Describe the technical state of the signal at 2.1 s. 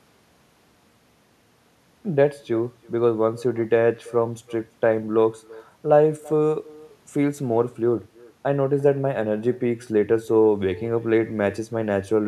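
At 2.1 s, as across the whole clip, there is echo with no canceller: the far end's loudspeaker feeds its own microphone and nothing removes it, so the speech returns roughly 300 ms later, about 23 dB down, as a thin shadow trailing each phrase.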